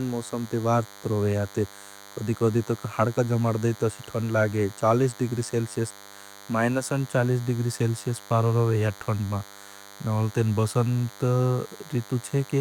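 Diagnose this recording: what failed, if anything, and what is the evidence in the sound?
A thin, steady buzz sits under the speech for the entire recording, roughly 20 dB below it, with a rasping, harmonic-rich edge rather than a smooth hum. This is DECT cordless phone buzz, picked up in the analogue wiring. A nearby DECT handset or base transmits a short radio burst 100 times a second. The microphone or preamp circuit rectifies each burst, turning the radio pulses into a 100 Hz pulse train with a dense stack of harmonics.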